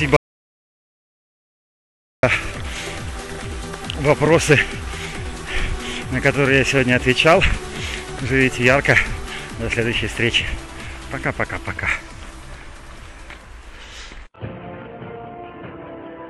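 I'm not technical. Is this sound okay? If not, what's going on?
No. Almost right at the start, from 0.17 s to 2.23 s, the sound cuts out completely for about two seconds and then comes back mid-flow. This is an audio dropout to silence: the gap is silent, with not even the faint background hiss a room normally has. The likely cause is that the input was briefly lost, through a loose connection, a failed link or an accidental mute, while the recording kept running. Whatever happened during those two seconds is gone.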